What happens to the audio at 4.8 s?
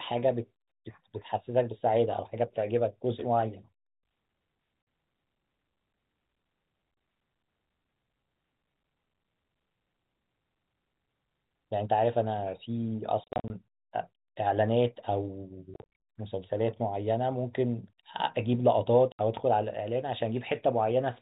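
At 4.82 s the speech drops out for 50 ms, ending at 4.87 s: packet loss filled with silence. Missing packets were replaced by silence, which fits five 10 ms packets, and the gap has hard edges.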